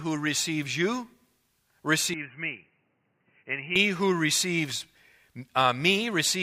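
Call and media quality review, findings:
Speech goes boxy 2.14–3.76 s: nothing above 3 kHz, about 10 dB quieter, new noise floor. Likely input switched to a poorer, narrower-band device; starts at "who receives".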